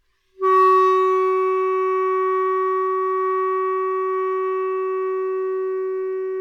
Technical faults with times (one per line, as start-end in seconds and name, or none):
1.27-3.25 repeated stalls (stutter)
3.42-5.06 jitter buffer slow-down